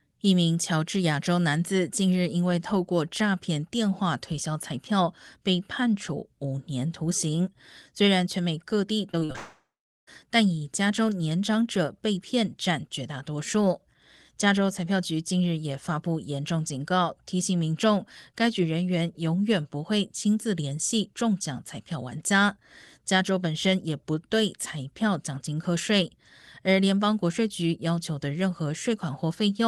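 From 9.11 to 9.36 s the speech breaks up with repeated packet loss, giving a robotic sound. Four short holes fall in this quarter-second, the longest about 39 ms. Each hole is filled by stretching the last bit of sound. So roughly a third of the stretch is patched, not real. The effect is choppy, with small pieces of speech missing.

Right after, from 9.36 to 10.09 s, the sound drops out for about 0.7 s. This is likely a long network dropout. The receiver first carries the last sound on as a fading buzz. Then about 0.42 s of near silence follows. The speech resumes at 10.09 s, but the part that fell into the gap is gone. Across the call path, the sound tops out near 12 kHz.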